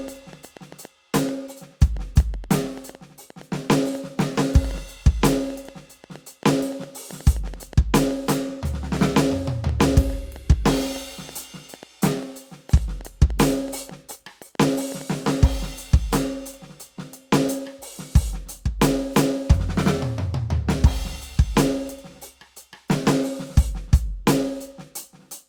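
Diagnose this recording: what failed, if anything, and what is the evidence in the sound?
A train of clicks runs over the music from 0.08 s to 15.4 s. About 70 clicks arrive at roughly 4.8 per second, spaced irregularly. Each has much the same shape, and they peak at about the level of the music itself. They sound like ticking on top of the sound, including in quieter passages. The likely stage is analogue wiring picking up pulsed interference from nearby equipment, or a faulty connection or power supply.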